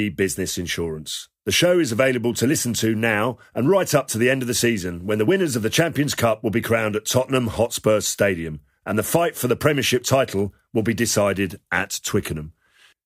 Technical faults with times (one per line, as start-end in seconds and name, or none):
none